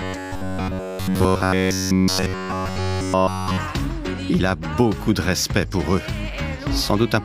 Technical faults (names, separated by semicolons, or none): robotic sound from repeated short buffers